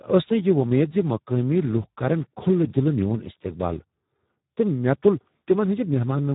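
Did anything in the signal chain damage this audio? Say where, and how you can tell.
Yes. The damage happens at the codec stage and runs through the whole speech clip. It is the Speex codec at a very low quality setting, consistent with a bitrate of about 8 kbps. The CELP model has few bits left for the excitation, so the voice comes out hoarse, noisy and buzzy, close to robotic. Nothing is present above about 3.8 kHz, which leaves the band narrow and muffled, with sibilants dulled throughout.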